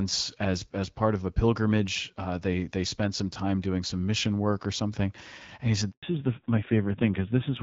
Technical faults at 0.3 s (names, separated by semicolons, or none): none